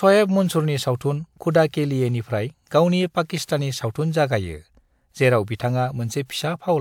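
Nothing in this speech recording points to a technical fault. There is no moment in the audio that calls for a timestamp or a closer look.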